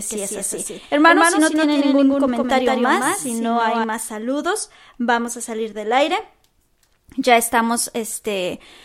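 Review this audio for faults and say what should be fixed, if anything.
From the start to 3.84 s there is a doubled audio track: one full-band copy of the speech trails by roughly 150 ms, about 5 dB quieter, likely from a second, slower capture path. Unlike room echo, it has no decay and stops abruptly. Route each source through only one capture path.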